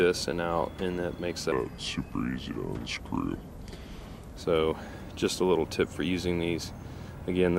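The sound runs through a section at the wrong speed from 1.52 to 4.37 s, playing at 0.755 times its proper rate, so it drags and drops about five semitones in pitch before snapping back. Likely cause: that segment was resampled or clocked against the wrong rate.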